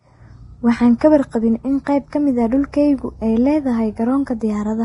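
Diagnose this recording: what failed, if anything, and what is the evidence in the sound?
Vorbis compression, throughout the speech, at the codec stage. The treble stops dead at about 10.6 kHz, and what remains in the upper range has a hissy, grainy texture rather than clean detail, with tones sounding roughened. The damage is heavy and is likely from Vorbis coding at a low bitrate, around 28 kbps. At that rate the encoder lowers its cut-off and quantises the residue above its spectral floor so coarsely that fine treble structure turns into noise of similar energy.

Pre-echo, from 1.84 to 1.87 s and again at 2.72 s, also at the codec stage. Just before each sharp onset, a short burst of hiss appears, lasting about 26 ms the first time and 14 ms the second, and the attacks themselves sound softened and smeared. The transform spreads quantisation noise across its whole block, so when a loud onset lands late in a block, noise scaled for that onset leaks into the quiet stretch ahead of it.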